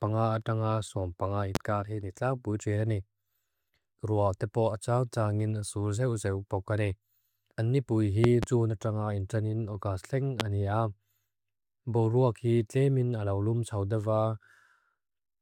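At 1.55 to 1.58 s, a loud pop cuts through the speech. Another follows at 8.24 to 8.46 s, just after "ni pui", as two pops in quick succession. A third lands at 10.40 to 10.43 s. Each peaks about 20 dB above the speech. The speech carries on beneath them. The likely cause is a sudden voltage step or pulse from a plug, switch, static or driver glitch, shaped by the circuits downstream.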